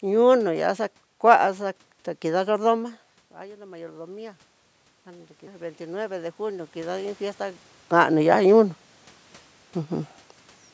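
From 1.58 to 4.48 s, then from 5.04 to 7.68 s, ending just before "kani ya", voice and room noise swell together. This is automatic gain rising: the control sensed a quieter input and ramped its gain up by about 5 dB, then about 7 dB after the input dropped by about 17 dB.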